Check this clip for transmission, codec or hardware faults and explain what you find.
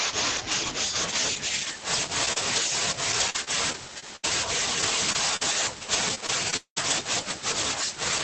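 Three kinds of packet-loss fault occur in this speech clip, all within a call path whose Opus coding limits the audio to 8 kHz, consistent with a low bitrate around 20 kbps.

Lost packets rebuilt from error correction, at 2.27–2.29 s, 2.36–2.38 s and 2.56–2.58 s: each time a 20 ms packet failed to arrive, but the following packet carried a reduced-bitrate duplicate of it, which the decoder played in its place. Nothing drops out, but each of these three brief moments sounds coarser and grainier than the audio around it.

Short concealed packet loss, from 2.33 to 2.38 s: here 20 ms of audio reached the decoder too late to use, and the receiver extended the preceding sound across about 31 ms before blending back into real audio. That makes a small smear or wobble, overlapping the second rebuilt packet.

Repeated packet loss (robotic sound), from 3.20 to 6.92 s: packets went missing twelve separate times, totalling about half a second, with the longest hole 199 ms. 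Each gap was bridged by stretching the last sound, and roughly a fifth of a second more was patched from error-correction copies. The result is choppy speech with pieces dropping out.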